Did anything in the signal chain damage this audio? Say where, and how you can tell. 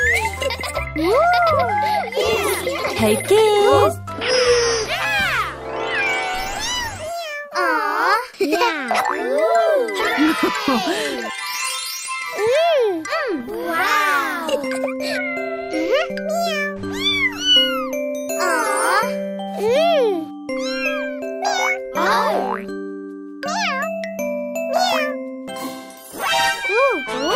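Yes. At 22.99 to 23.06 s there is a short stall from a late packet. The network jitter buffer ran dry, so the sound is held about 41 ms too long.

At 25.12 to 25.36 s there is a jitter buffer speed-up. The pitch is unchanged, but the audio runs at 114% speed. Pitch-period cuts remove about 40 ms to reduce the delay.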